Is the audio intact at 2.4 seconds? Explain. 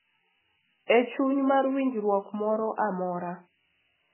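No, at 2.4 seconds the speech carries the same two faults it has from start to finish. First, low bit depth with noise shaping: the sound is built from only about 6 bits, and the rounding error is pushed upward in frequency, so a thin, steady hiss sits roughly 10 dB under the speech and leans toward the top of the band.

Second, the band stops dead around 3 kHz, and the sound has a watery, swirly texture with smeared attacks. That's likely MP3 compression at a very starved rate, something near 8 kbps, where the encoder cuts off the treble and weak frequency lines flicker on and off from frame to frame.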